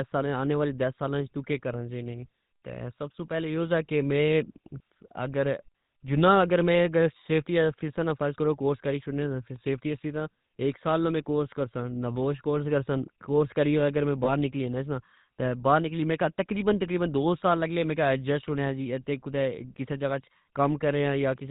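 Throughout, the GSM full-rate codec gives the speech a buzzy, gravelly roughness, and a spectrogram shows everything above 4 kHz cut away. From 14.24 to 14.30 s, between "کرسا کورس کریاگر میں" and "نکلی جانا بار نکلی", lost GSM frames are concealed by repeating the last good frame. The result is a brief metallic ring that fits one missing 20 ms frame, seen as a smeared, repeated band.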